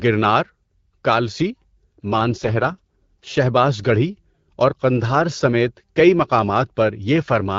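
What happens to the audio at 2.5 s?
At 2.5 s there is an AMR rate drop, from 2.18 to 3.38 s, just before "گڑھی اور قندھار". The speech turns rough and synthetic, which fits a drop from 12.65 to 6.6 kbit/s. On a spectrogram the band stays the same and there is no gap, but the harmonics blur.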